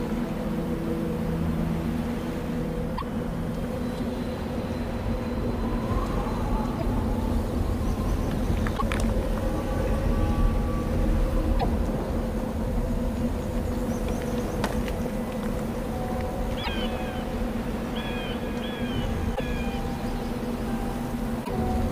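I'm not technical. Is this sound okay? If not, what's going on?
No. A broken MP3 bit reservoir is the likely cause of brief glitches at 2.97, 6.78, 8.77, 11.59, 16.63, 19.35 and 21.44 s. Each lasts about 60 ms, roughly two MP3 frames. Compressed pieces are missing, so the sound jumps ahead, and the next frames borrow data from the wrong place and come out garbled.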